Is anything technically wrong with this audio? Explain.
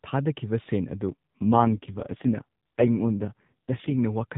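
Yes. From 1.08 to 3.97 s this speech shows an AMR rate drop. The mobile link falls back to a leaner coding mode, which fits a drop from 12.2 to 4.75 kbps, so the voice turns buzzier and more synthetic, then recovers. The narrowband ceiling and continuity stay intact, unlike a bandwidth switch or dropout.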